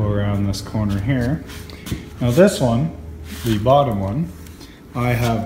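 Nothing goes wrong anywhere in the clip; there's simply no fault to point to, so you can just sit back and listen.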